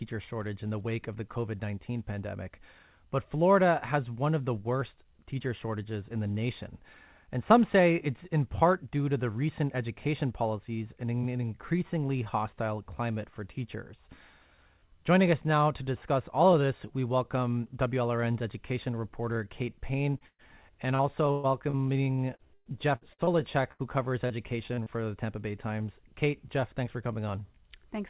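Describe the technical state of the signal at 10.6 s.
At 10.6 s the speech is intact, with nothing wrong beyond the call path's ordinary band limit, which leaves nothing above 4 kHz and fits a G.711 A-law link.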